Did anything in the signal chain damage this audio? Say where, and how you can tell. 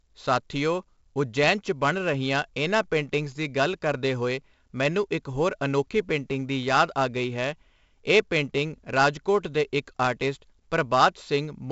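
Yes. The codec stage encoded this speech with 4-bit ADPCM throughout, which fits a 16 kHz, 64 kbps stream. A gritty hiss rides on every loud syllable and tracks its level, and attacks crunch where the adaptive step lags. Nothing sounds above 7.8 kHz, leaving the sound dull.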